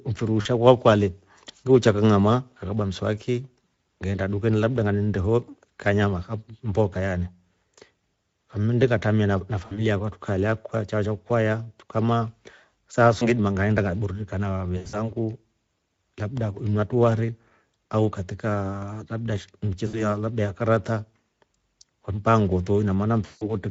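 Speex codec damage runs through the whole of this speech clip and is plainly audible. The voice has the coarse, hoarse texture of a CELP coder working with a thin excitation budget, and any upper-band content sounds like shaped noise rather than real detail, consistent with a Speex stream at roughly 16.8 kbps. VoIP packet loss concealed by the speech codec appears at 0.41–0.47 s, 9.65–9.83 s, 13.19–13.28 s, 14.77–15.10 s, 19.87–20.03 s and 23.25–23.53 s. At each gap the decoder carries its last pitch and filter forward, so the sound smears into a stretched, fading sound, and it stays weak for a short while after real audio resumes. The gaps sound like about 20 ms at 13.19 s, 40 ms at 0.41 s and 60 ms at 9.65 s and 19.87 s. The damage at 14.77 s is broken up across about 160 ms with a longest stretch of 80 ms. The final gap at 23.25 s is the longest, at about 160 ms.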